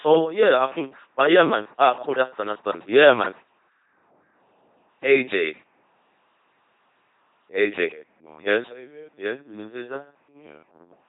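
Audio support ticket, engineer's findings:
LPC-10 vocoder throughout. Buzzy, mechanical robot speech, heavily damaged, nothing above 3.8 kHz. Sound fits a 2.4 kbit/s codec forcing each frame fully voiced or unvoiced.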